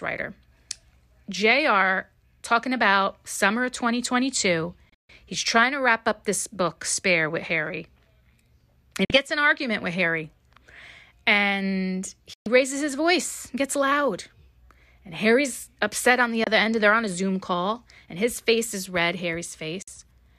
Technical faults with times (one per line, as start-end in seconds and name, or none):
4.89-5.10 digital broadcast dropout
9.05-9.10 digital broadcast dropout
12.34-12.46 digital broadcast dropout
16.44-16.47 digital broadcast dropout
19.82-19.88 digital broadcast dropout